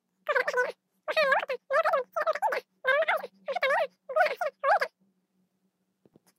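A speech clip with a wrong sample rate throughout: it runs three times too fast and sits about 19 semitones high, chipmunk-like. That fits 16 kHz audio being played back at 48 kHz with no conversion, so speed and pitch shift together.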